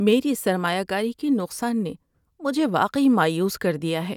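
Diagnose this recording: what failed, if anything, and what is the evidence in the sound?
Nothing in this speech recording points to a failure at any stage, so there's no fault to diagnose here.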